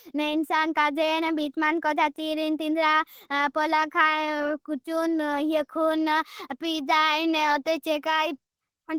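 From start to finish the speech carries plainly audible codec damage, most likely Opus compression running at a low rate, something in the region of 16 kbps. At that rate the encoder sits in its hybrid speech mode, so the voice comes across muffled and a bit hoarse, with a grainy, rough edge instead of a swirl. The band still reaches up to about 20.2 kHz; the harm is in the coarseness, not in missing top end.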